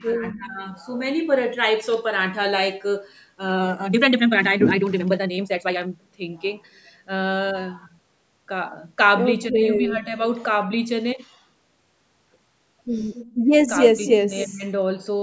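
Speech suppressed in double talk opens the clip, from 0.0 to 0.56 s: the voice sinks by about 15 dB for around half a second, as if someone had turned it down. The likely cause is the echo canceller hearing the far side at the same moment and, unable to tell the local talker from loudspeaker echo, attenuating everything. The same double-talk suppression returns in two shorter dips, at 9.48 to 9.62 s (about 10 dB) and 9.79 to 10.15 s (a milder dip of about 5 dB), so the voice briefly thins and recedes.

Echo leak appears at 13.14 to 13.34 s as a faint copy of the voice trailing it by about 0.27 s, roughly 20 dB below the direct speech. This is likely residual loudspeaker sound at the far end that its echo canceller failed to remove, sent back down the line.

Background gated by the echo canceller follows at 13.34 to 13.47 s. The room tone drops by about 15 dB for a moment, then returns as the canceller releases the microphone it had clamped down while playback was active.

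Echo leak comes back louder at 13.67 to 13.88 s, again delayed by about 0.27 s and only about 10 dB under the speech.

Speech suppressed in double talk is deepest from 13.93 to 14.65 s, cutting the voice by as much as about 25 dB across roughly half a second, so it nearly vanishes in places. A brief echo-leak fragment at the same 0.27 s delay breaks through inside that stretch, at 14.07 to 14.11 s. Throughout, the call microphone processing limits the audio to nothing above 8 kHz.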